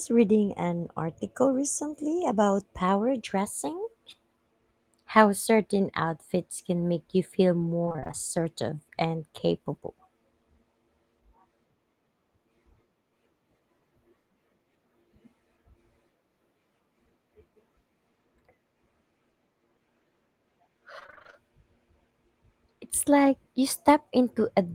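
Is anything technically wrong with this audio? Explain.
Yes, repeated packet loss (robotic sound) at 7.84–8.15 s and 20.99–21.35 s: about half of each stretch is lost data, patched by extending the previous sound. Successive gaps up to 24 ms give a choppy sound with pieces missing rather than a single clean dropout.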